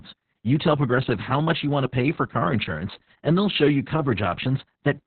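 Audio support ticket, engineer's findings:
Speech muffled, hoarse, faintly robotic for the whole clip; nothing audible above about 4.3 kHz. Opus voice compression, SILK narrowband mode. Coarse excitation coding and a 4 kHz band cap, consistent with roughly 6 kb/s and long 60 ms frames. Heavy codec damage.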